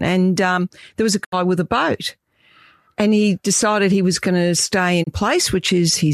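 At 1.23 s the speech drops out for about a tenth of a second, returning at 1.34 s. It is a digital broadcast dropout. The receiver stopped getting valid frames and muted, fading down over 20 ms. About 72 ms of programme is gone, which fits three lost frames. A shorter hole follows at 5.02 s, ending at 5.09 s. It also fades over 20 ms and loses 24 ms, which fits one frame.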